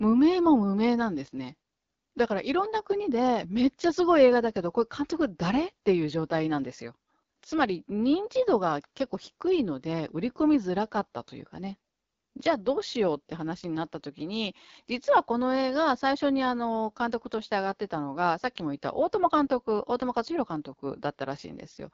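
From start to finish the speech carries AMR wideband (HD Voice) codec damage, and it's plainly audible: a rough, raspy texture with nothing above 7.5 kHz. That grit suggests one of the lowest AMR-WB modes, around 8.85 kbit/s, where the vocal-tract model can't keep up.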